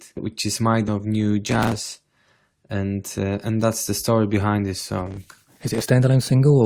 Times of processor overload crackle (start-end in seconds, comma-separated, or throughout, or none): 1.47-2.00, 5.07-5.84